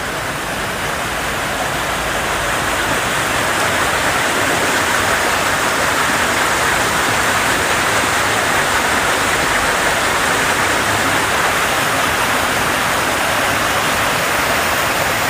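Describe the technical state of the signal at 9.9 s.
At 9.9 s the signal is intact, with no dropout, clipping, glitch or other fault audible at that moment.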